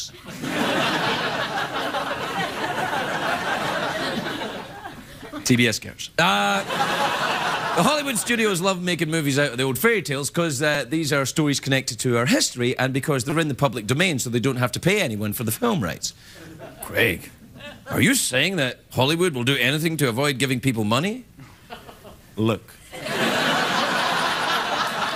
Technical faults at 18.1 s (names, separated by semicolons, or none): none